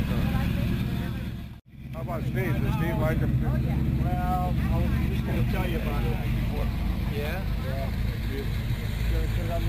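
Throughout, there is imaging from sample-and-hold upsampling. Samples were repeated without smoothing, which fits 16 kHz audio raised to 44.1 kHz. A mirrored copy fills 8 to 16 kHz, about 28 dB down, heard as metallic fizz following loudness. A spectrogram shows an inverted reflection; the waveform shows tiny stair-steps.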